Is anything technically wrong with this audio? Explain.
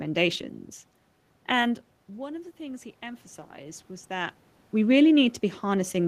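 Yes. From 2.17 to 4.43 s there is automatic gain rising. The level reaching the microphone falls by about 16 dB, partly because the talker moves back around one and a half seconds in. The gain control reads this as a quiet input and slowly turns itself up, by about 4 dB over those two seconds. You hear the voice and the room noise swell together. The talker's second shift, near four seconds, is natural movement.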